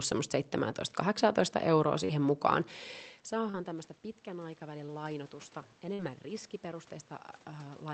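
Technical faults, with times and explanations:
2.05–2.10 s, 3.50–3.55 s and 4.86–4.89 s, short concealed packet loss: three quick blips where a few hundredths of a second of audio didn't arrive in time. The receiver papered over each hole by carrying the last bit of sound forward, about 36 ms of fill at the first two and 20 ms at the third, then crossfaded back into the real stream. You hear a tiny smear or wobble, and roughly 20 to 40 ms of the actual sound is gone each time.
3.36–6.95 s, automatic gain rising: just before this the level at the mic drops by about 19 dB, as the talker moves back around 3.0 s. The gain control notices the input has gone quiet and slowly turns itself up, by about 6 dB over those three and a half seconds. So the voice and the room noise swell together. The lift is gradual rather than a sudden jump, and it only wins back part of the drop.
5.94–6.00 s, burst of packet loss: a longer run of missing audio, about 50 ms, bigger than the blips above. 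The concealment stretches the last sound across the gap and fades it down as it goes, so it comes out as a held buzz or a fading hiss, not a smear. When the real audio resumes it has jumped ahead, and about 50 ms of the original is simply missing. The Opus path's top end stops around 8 kHz here, which is the normal band limit of the call.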